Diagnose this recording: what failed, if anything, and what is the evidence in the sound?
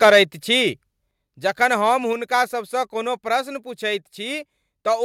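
Microphone overload, at the converter, from 0.02 to 0.21 s: peaks are flat-topped, driven about 5 dB past the converter's limit, with roughly a tenth of samples clipped, giving a harsh crackle on the loudest syllables. Unlike codec distortion, it tracks loudness, likely from excessive analogue input gain.

Microphone volume stepped down, in call processing: the level drops abruptly at 0.1 s (about 2 dB), 1.11 s (about 5 dB) and 2.13 s (about 3 dB), taking voice and background down together. Instant steps, not a smooth gain ride, point to software likely lowering device input volume after clipping.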